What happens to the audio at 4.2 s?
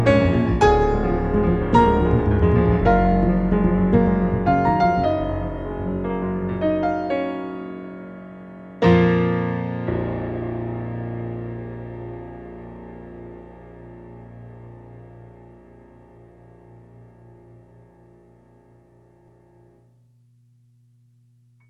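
Nothing goes wrong at 4.2 s; the audio runs through that moment intact, with no audible fault.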